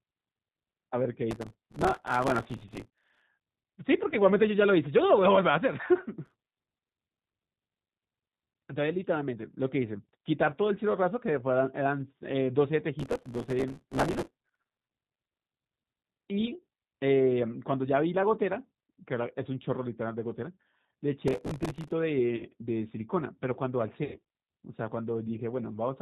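From start to finish the speech is carried by the G.729 codec at 8 kbit/s, with plainly audible damage. Everything above 4 kHz is gone, and the voice has the slightly rough, synthetic grain of a model-based coder. Unlike loss or overload damage, this colouring is steady throughout.

Processor overload crackle first appears from 1.31 to 3.22 s. The machine repeatedly missed its deadlines on very short buffers of a few milliseconds, and each miss replayed a scrap of old audio with hard edges. Many such misses in a row make a gritty tearing that rides on the speech and stops once the load clears.

At 4.10 to 4.16 s comes VoIP packet loss concealed by the speech codec, about 20 ms missing, which fits a single lost packet. The decoder stretched its last pitch and filter into a brief fade, and the voice stays weak just afterward. It fades rather than tearing, which sets it apart from the crackle.

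The crackle returns at 6.26 to 6.95 s, 13.00 to 14.89 s, and 21.28 to 21.92 s. Each burst has the same hard-edged, fragmented texture.

Concealed packet loss recurs at 22.36 to 22.44 s, about 40 ms, consistent with two packets, and at 24.04 to 24.21 s, about 100 ms, consistent with five. The longer gap is heard as a drawn-out sound that decays, with the voice recovering slowly after it.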